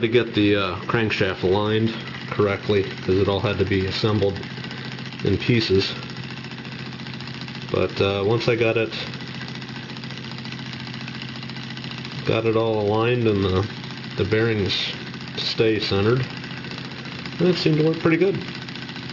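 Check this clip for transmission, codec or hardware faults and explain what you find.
One fault runs through the whole clip: aliasing. Content above 6 kHz folds back below it as gritty, metallic tones, fairly strong beneath the signal. That fits downsampling to 12 kHz without an anti-alias filter. Plain band-limiting would only sound dull.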